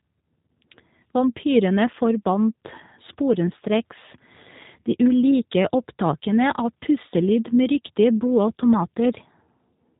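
G.729 codec coding runs throughout the speech, cutting everything above 3.8 kHz and rebuilding each frame from a vocal tract filter, pitch predictor and a few pulses, which fits an 8 kbit/s voice link. The damage is plainly audible: dull, slightly rough, synthetic-sounding speech.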